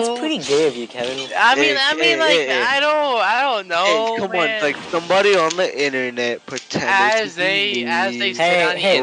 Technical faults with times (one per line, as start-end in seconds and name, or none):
none